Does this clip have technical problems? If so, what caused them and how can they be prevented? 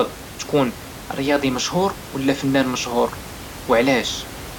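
No, nothing in this speech clip stood out as a technical problem on listening.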